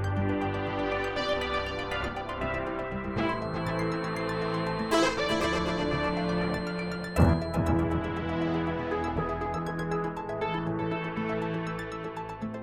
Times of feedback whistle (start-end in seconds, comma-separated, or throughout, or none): 3.07-7.65